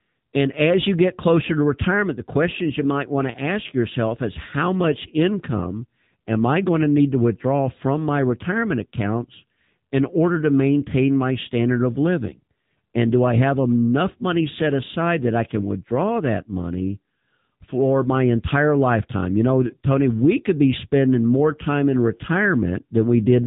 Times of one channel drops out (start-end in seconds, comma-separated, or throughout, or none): none